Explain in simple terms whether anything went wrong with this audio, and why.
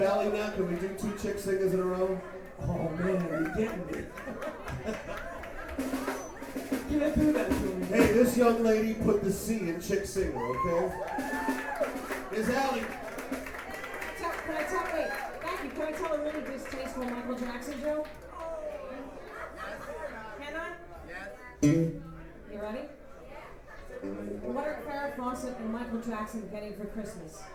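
Channel delay (comb filtering) occurs from 15.75 to 16.75 s. For that second, one of the two original channels ran very slightly late, by roughly one sample, or about two hundredths of a millisecond, before the two were combined into one. Because the copies no longer lined up, the highest frequencies partly cancelled, with the first gap near the top of hearing, around 20 kHz. The sound there becomes duller at the very top, not hollow or doubled.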